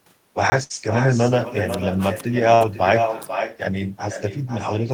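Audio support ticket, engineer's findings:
Echo with no canceller, throughout: quieter, thinner copy about 8 dB down, trailing by about half a second. Far-end loudspeaker into mic, no AEC. A distinct repeat, not reverb tail.

Block of digital silence, 0.50 to 0.52 s: 20 ms hard dropout with no fade. Likely output buffer underrun. Digital silence, no concealment fill, unlike packet loss.

Burst of packet loss, 0.63 to 0.72 s and 2.55 to 2.63 s: roughly 60 ms of sound missing, bridged by a fading continuation of the last sound. Network loss, receiver concealment. Audio skips ahead, not silence.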